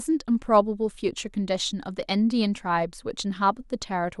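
No faults to report; the speech runs without any audible technical defect.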